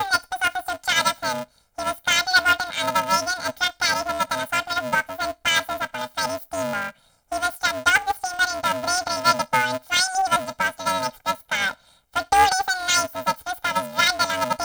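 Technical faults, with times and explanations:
Throughout: planar audio read as interleaved. Each 2.67 ms stretch of speech, which fits 128-sample blocks, is played as its left half then its right half at double speed. The switching repeats at 375 Hz, producing a robotic buzz rather than an octave shift.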